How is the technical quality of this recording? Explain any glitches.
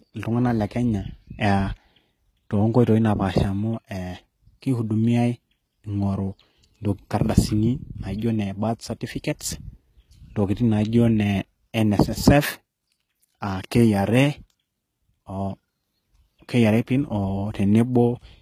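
Plainly audible codec damage runs through the whole recording. It sounds like HE-AAC compression at a very low bitrate, fitting roughly 20 kbps. The likely cause is spectral band replication: only the lower spectrum is coded, and the treble is rebuilt by copying lower bands upward under a coarse envelope. The top end therefore stays bright but synthetic, and s sounds come out gritty, metallic or lispy. Nothing reaches above 14.9 kHz. Unlike a simple low-pass, the treble is present but fake rather than dull.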